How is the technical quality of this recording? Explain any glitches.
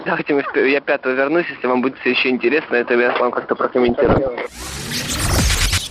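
The technical quality is poor. The sound is compressed throughout, with two short bursts of damage near the end.

MP2 compression runs through the whole clip. The top end sounds dull, and a gurgling, granular grain sits on everything. The likely cause is MPEG Layer II coding at a low rate, which fits about 80 kbps. At that rate the coder cannot fund all 32 sub-bands. Upper bands drop out or flicker, and the surviving ones are coarsely quantised.

DAB burbling appears from 3.88 to 4.28 s and again from 5.57 to 5.68 s. Bit errors slipped past error correction into the coded audio, at around half a percent in the first burst and a bit less in the second. Corrupted samples put short blips of noise into single sub-bands, and corrupted scale factors make sub-bands jump in level for up to a frame. The first burst fits roughly 17 damaged frames, the second about 6. The bursts add short noisy blips to the sound.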